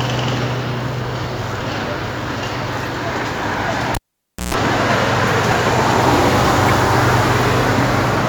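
At 2.83 s and again from 6.68 to 6.71 s, a corrupt frame was decoded: a couple of damaged frames misplace energy, producing short blips, the second much louder at about -5 dBFS. From 3.95 to 4.54 s, a cable pulled and plugged in gives a pop, about half a second of near silence, roughly 0.13 s of 60 Hz mains buzz, then a return pop.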